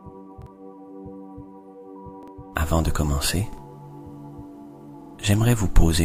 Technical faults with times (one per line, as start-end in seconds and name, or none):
0.42-0.46 repeated buffer
2.23-2.28 repeated buffer
3.53-3.58 repeated buffer
5.02-5.15 repeated buffer